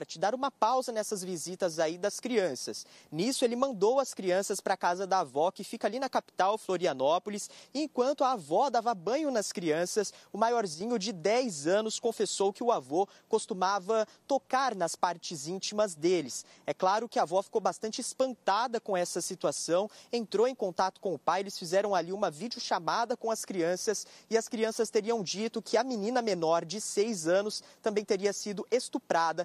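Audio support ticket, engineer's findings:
Abrupt level dip, 10.74 to 10.81 s, about 66 ms. Shared content falls by about 6 dB, then snaps back. One channel drops out, likely a stereo link or interface glitch briefly losing one side before the mono fold. Anything unique to that side vanishes for the gap. Worth checking the channel's connection or driver path.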